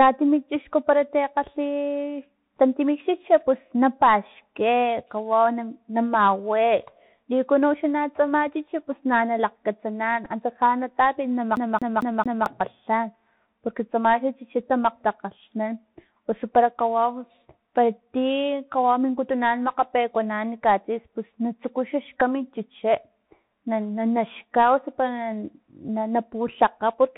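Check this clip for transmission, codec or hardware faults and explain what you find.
Yes, there are three kinds of fault here: a narrowband headset codec across the whole speech clip, two brief packet repeats, and one CD-style skip.

Bluetooth CVSD headset codec, throughout: the speech has been squeezed through a one-bit-per-sample delta coder, which fits 64 kbps CVSD. Each bit just nudges the waveform up or down with an adapting step, so nothing survives above 4 kHz. The damage is plainly audible. Sibilants come out scratchy, loud bright moments smear because the step can't keep up, and a grainy hiss sits under everything.

Bluetooth headset packet repeated, at 10.25 to 10.29 s and again at 22.20 to 22.22 s: about 7.5 ms of audio went missing each time, which points to a couple of lost voice packets. The chip filled the gap by decoding the previous packet again. At that length you don't get the sustained buzz that a longer run would produce. 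Each one is just a small tick or roughness in the flow.

CD stuck on one turn, from 11.56 to 12.46 s: a roughly 0.22 s slice of audio plays four times in a row, with a tiny mute at each jump back. That's the laser getting thrown back a track at the same point on every rotation, as if the disc were scratched. It's the quick, even stutter of a skipping CD, and it sounds nothing like a network dropout.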